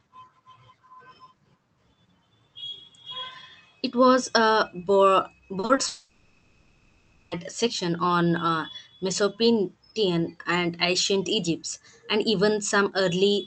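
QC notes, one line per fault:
5.59 to 5.79 s, short concealed packet losses: three brief gaps, at 5.59 to 5.65 s, 5.65 to 5.71 s and 5.75 to 5.79 s. About 40, 40 and 20 ms never arrived in time. The decoder extended the preceding sound and blended back, so each gap is a quick smear or wobble.
5.87 to 7.33 s, long network dropout: roughly one and a half seconds of audio is missing. The receiver kept stretching the last sound into a buzzy, fading hiss across the whole gap, with no true silence. Audio resumes at 7.33 s without the lost part. A network outage is the likely cause.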